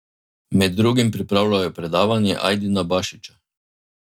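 No technical faults are audible anywhere in this speech recording.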